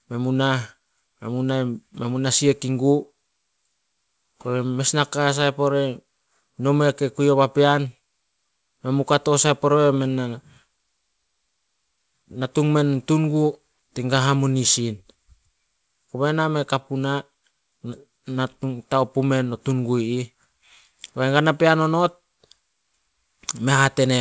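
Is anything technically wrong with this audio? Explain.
No, nothing is technically wrong with this audio.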